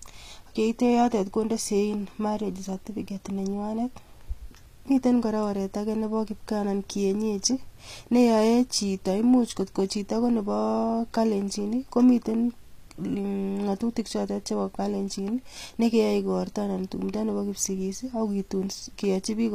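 All the way through, the sibilants go gritty and lispy with nothing above 14.9 kHz, likely HE-AAC compression at something like 24 kbps rebuilding the treble from copied lower bands.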